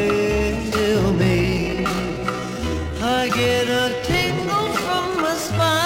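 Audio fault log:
1.20 to 5.86 s, time-stretched section. From 1.20 s to the end, the sound suddenly runs slower, at about 0.63 times its earlier pace, while its pitch stays where it was. The slowed part drags. This is likely software lengthening the passage to fill a set duration. It keeps the pitch by repeating short slices of the sound. Those repeated slices overlap.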